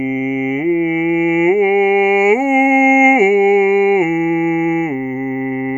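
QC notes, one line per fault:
No faults noted in the music.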